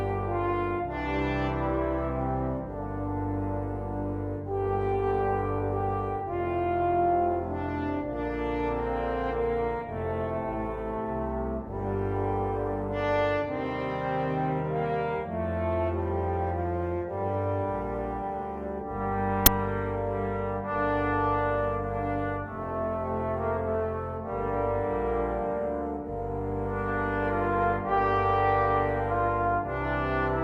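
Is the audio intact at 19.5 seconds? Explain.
No, right around 19.46 s there's an uninitialised buffer: a roughly 11 ms block was played out before any audio got written into it, so stale memory came through as samples. It's a sudden, loud crack, and its length fits a 512-sample buffer.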